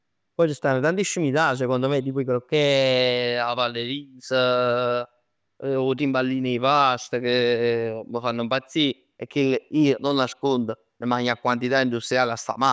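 No technical faults can be heard in this speech recording. There is no event anywhere in it that calls for a time or a description.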